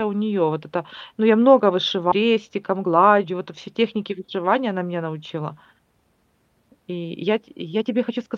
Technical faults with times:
2.11-2.13 skip ahead
2.21-4.04 jitter buffer speed-up

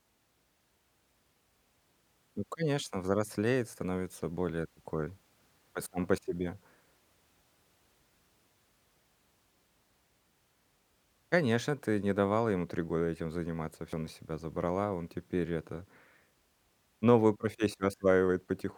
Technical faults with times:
13.93 audio missing between chunks

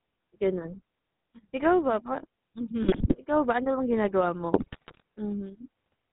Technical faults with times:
0.00-6.13 GSM full-rate codec
2.82-3.16 GSM bit errors
4.54-5.02 GSM bit errors

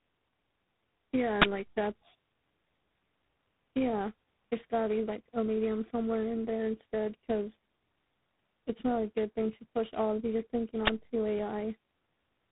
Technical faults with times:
0.00-12.52 tandem speech coding
1.42 invalid numbers at full scale
10.87 invalid numbers at full scale

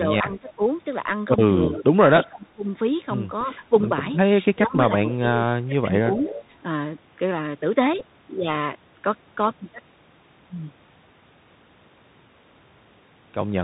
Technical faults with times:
0.00-13.63 Bluetooth CVSD headset codec
0.21-0.62 speech suppressed in double talk
0.32-0.37 echo leak
1.70-2.64 speech suppressed in double talk
3.44-3.91 speech suppressed in double talk
4.53-6.44 speech suppressed in double talk
6.20-6.41 echo leak
8.00 Bluetooth headset packet repeated

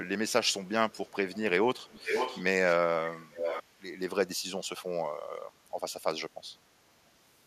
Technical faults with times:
0.29-1.39 echo leak
1.78-2.75 echo leak
3.13-3.63 echo leak

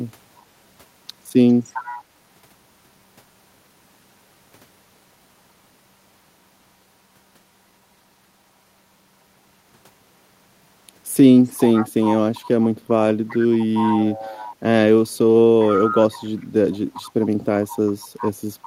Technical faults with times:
1.48-2.01 echo leak
11.44-14.52 echo leak
15.60-17.10 echo leak
17.88-18.66 echo leak

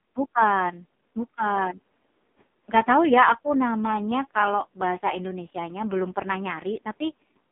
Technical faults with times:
0.00-7.51 AMR narrowband mobile codec

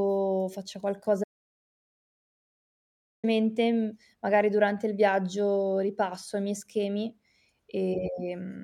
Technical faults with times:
1.24-3.24 audio dropout to silence

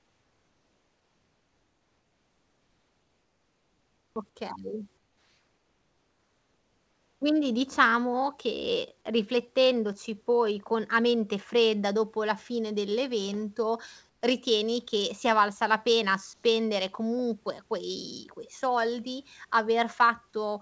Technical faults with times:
0.00-4.16 comfort noise in place of the background
4.97-7.21 comfort noise in place of the background
14.09-14.21 comfort noise in place of the background
16.33-16.43 comfort noise in place of the background

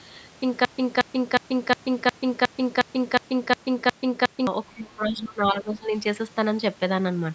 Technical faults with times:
0.65-4.47 broken-record loop
4.66-5.95 speech suppressed in double talk
4.75-4.84 other side's voice leaking through

